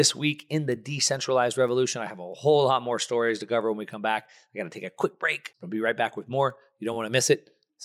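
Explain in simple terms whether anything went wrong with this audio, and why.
Something did go wrong. From 0.40 s to 7.79 s, sharp ticks cut into the speech about every third of a second, roughly twenty in all. These are word clock ticks. Two pieces of digital gear were passing audio between them, but each kept its own time. Their clocks ran very slightly apart. Each time they drifted a full step out of line, one sample was lost or doubled. That tiny jump is the tick you hear.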